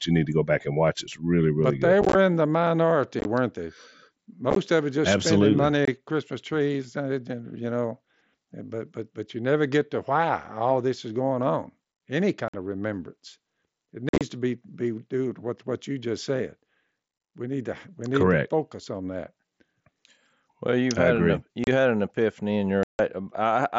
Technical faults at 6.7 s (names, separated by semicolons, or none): none